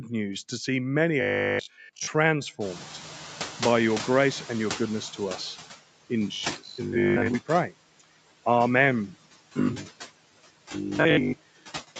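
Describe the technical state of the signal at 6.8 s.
A rigid, metallic buzz at 50 Hz runs from 6.28 to 7.34 s, with the speech only roughly traced. This is robotic sound from repeated short buffers, likely caused by audio arriving too seldom, so a 20 ms stretch is replayed over most of the span. Within that span, from 6.56 to 6.79 s, parts of the speech sound swallowed, dropping by about 12 dB over roughly 150 ms in total. This is speech cut by the noise suppressor, which mistook those parts for background noise. Throughout the clip, the room noise pumps down between phrases and back up beneath them. These are noise suppressor artifacts from frame-by-frame band attenuation that lowers the noise by about 16 dB.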